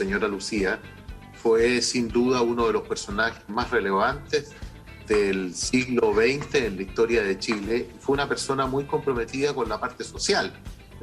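No technical faults are audible anywhere in the recording.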